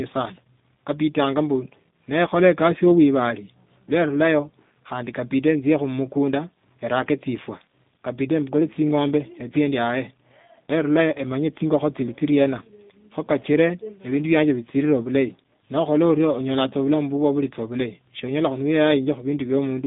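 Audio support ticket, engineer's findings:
Narrowband, rough, slightly synthetic speech for the whole clip. Likely component: G.729 codec, consistent with 8 kbit/s G.729A. Band limited to 150 Hz to 3.7 kHz. Speech rebuilt from filter, pitch predictor and sparse pulses, so damage is plainly audible.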